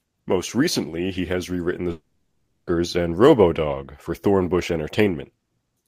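At 1.91 s the speech cuts out and does not return until 2.69 s, a gap of about 0.78 s typical of a long network dropout. The last sound before the break is briefly drawn out into a fading buzz, and then about 0.64 s of near silence follows. When the speech resumes, the portion that fell inside the gap is missing, likely because a run of packets never reached the receiver and its concealment ran out.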